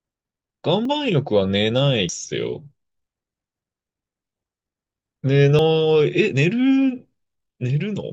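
Speech with three points where the audio jumps ahead at 0.85, 2.09 and 5.59 s, losing about 40 ms, 100 ms and 40 ms, likely from a dropped buffer (overrun). Each appears as a waveform discontinuity with no silent gap and a thin vertical broadband stripe on a spectrogram.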